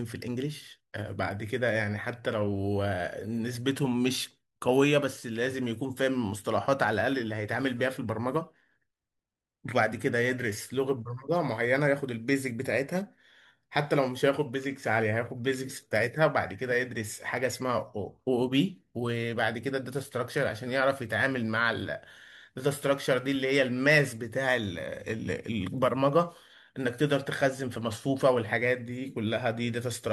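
Nothing technical stands out in this speech recording; it sounds fine all the way along, with no faults to point to anywhere.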